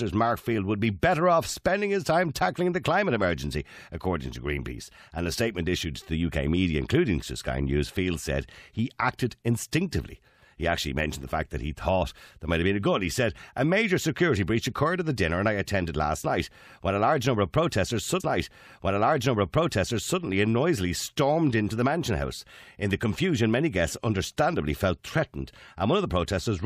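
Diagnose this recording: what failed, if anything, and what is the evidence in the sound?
Playback stage: a stream segment repeated. At 18.19 s the speech jumps back with a small blip, and the same two seconds replay through 20.19 s. The player queued or fetched one segment twice, adding about 2.0 s of duplicated programme.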